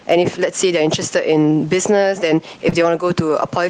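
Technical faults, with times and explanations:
Throughout: gain pumping. Loud and quiet passages sit closer together than they should, and the whole clip sounds squashed. This is likely from input gain set far too high and a fast limiter or compressor clamping it, with the level swinging by roughly 10 dB. On a waveform the envelope looks flattened.
2.69 to 2.79 s: short stall from a late packet. One stretch of speech is held too long, with about 28 ms of sound stretched to cover a packet that arrived late, and a faint buzzy, slightly dipped quality on the held portion. Nothing is lost, because playback resumes from where it stopped, but everything afterwards runs about 28 ms later. The spectrogram shows a brief smeared, repeated-looking patch where harmonics hold steady instead of moving. The waveform shows a short region of near-periodic repetition.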